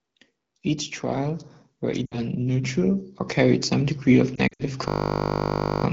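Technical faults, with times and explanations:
2.05 to 2.20 s and 4.36 to 4.63 s, lost AMR speech frames: failed frames are filled by repeating the last pitch with falling gain. The first is a 60 ms run that drops to near silence within two frames. The second scatters 120 ms of gaps across 240 ms. On the spectrogram, harmonics smear flat and fade before the speech returns.
4.88 to 5.84 s, system hang loop: a frozen computer or driver kept replaying one 20 ms buffer, giving a steady 50 Hz buzz. The waveform shows an identical short cycle repeated exactly.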